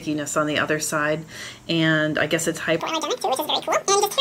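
Audio read two samples at a time (double speed) affects the clip from 2.80 s to the end at 4.20 s. In that stretch the audio runs twice as fast and jumps a full octave, 12 semitones, higher. The decoder appears to be treating each pair of samples as a single frame, as if the stream had two channels or samples twice as wide.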